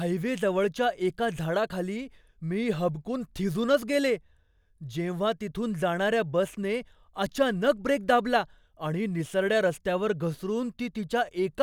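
No technical faults can be heard in this speech recording. There is nothing at any point that calls for a time or a measurement.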